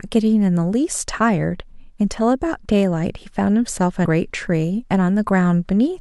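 At 4.04 s, damaged data in the compressed stream knocks the decoder off sync, leaving a glitch of about 14 ms.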